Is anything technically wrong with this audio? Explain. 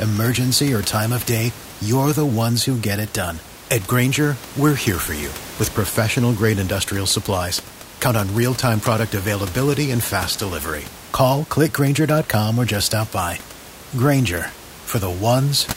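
No, nothing is technically wrong.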